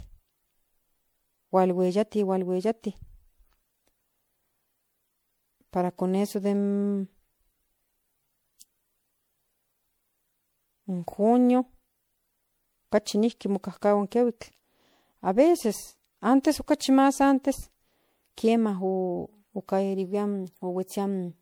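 Across the whole speech recording the sound is swirly, smeared and hollow, with softened consonant attacks and a watery shimmer that goes beyond what a single lossy encode at this quality would leave. The pattern is consistent with generation loss, likely from decoding and re-encoding MP3 around seven times at what sounds like 96 kbit/s. Each pass requantises on a shifted frame grid, so noise and spectral holes accumulate. Content stops near 20.8 kHz.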